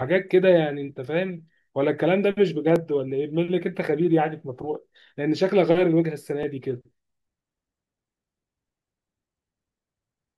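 Clock drift buffer slips recur from 0.92 s to 10.10 s as clicks every 1.84 s, about seven in all, each a brief tick in the speech. The likely cause is two devices running on separate clocks that disagree by roughly 700 parts per million, so the buffer between them drifts until a block of around fifty samples is dropped or repeated, producing a click at each slip.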